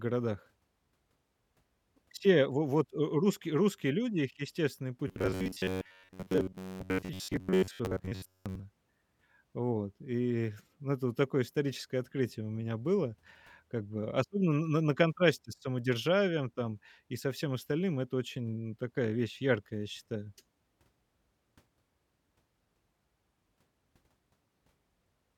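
Between 5.08 and 8.61 s, just after "русские люди их естественный", incoming audio is likely arriving too seldom, so a short stretch of roughly 10.7 ms is replayed over and over in place of the missing material, for most of that interval. This is robotic sound from repeated short buffers. The loop period imposes a steady buzz near 93.8 Hz, turning the speech into a flat, metallic drone that only loosely tracks the speech.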